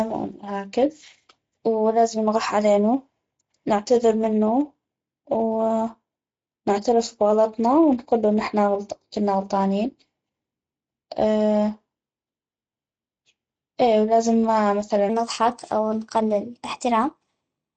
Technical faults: Speex codec; section at the wrong speed

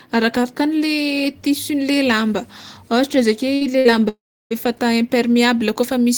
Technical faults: burst of packet loss; long network dropout

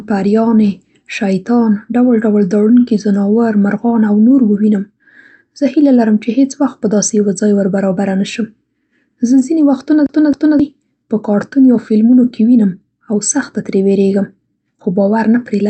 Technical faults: CD stuck on one turn

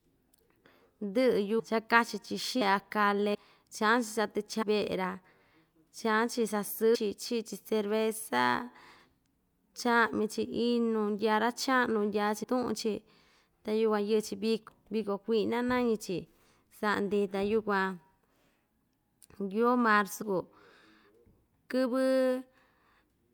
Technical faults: compressed frames skipped

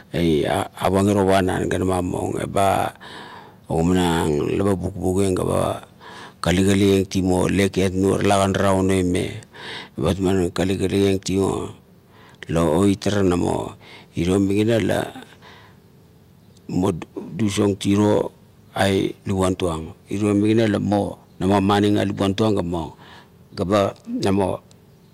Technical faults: dropped samples

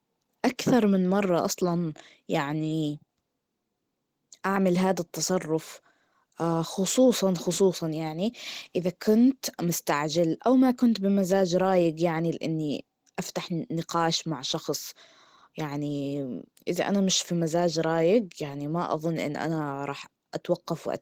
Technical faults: none

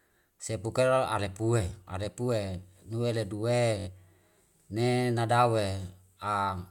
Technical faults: Bluetooth stutter

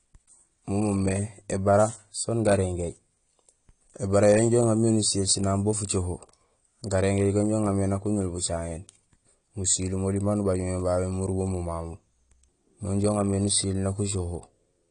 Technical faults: AAC compression

